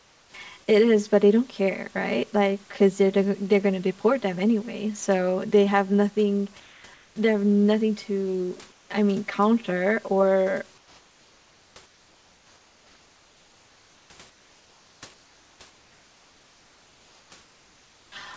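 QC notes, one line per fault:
Throughout: channel delay (comb filtering). One channel arrives roughly 5 ms late and the two sum to mono, cancelling at evenly spaced frequencies from around 100 Hz upward. The result is a steady hollow, phasey colour. Unlike codec dullness, these notches stay fixed and affect the whole band, not just the top, which stops near 8 kHz here.
0.00–0.34, 6.60–7.16, 8.72–8.90, 10.78–18.12 s: comfort noise in place of the background. In each pause the real room background gives way to a smooth, featureless hiss, about 5 to 6 dB quieter where measured. This is likely discontinuous transmission filling silence with synthetic noise. It differs from a plain dropout because sound never goes dead.
0.31–0.34 s: onset clipped by the voice detector. The first 30 ms of the opening sound is missing, so it starts abruptly out of the synthetic hiss with no soft attack. The likely cause is a slow voice detector. 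Unlike a dropout, only the beginning is lost.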